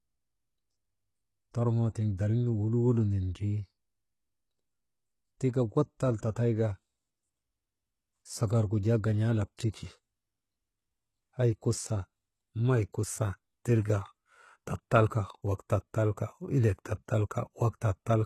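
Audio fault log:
Throughout: HE-AAC compression. The speech has a bright but synthetic top end, with sibilants turning gritty and lispy, and nothing above about 12.3 kHz. This is likely a low-rate HE-AAC encode, around 16 kbps judging by the plainly audible damage. The core codes only the lower spectrum, and the treble is rebuilt by copying lower bands upward under a coarse envelope, so upper harmonics no longer line up with the real ones.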